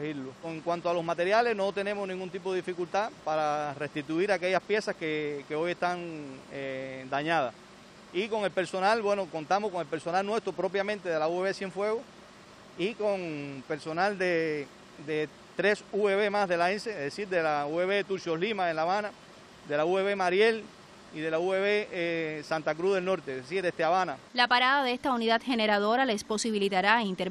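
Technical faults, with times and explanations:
No technical faults can be heard anywhere in the audio; the signal stays intact and continuous across the whole clip.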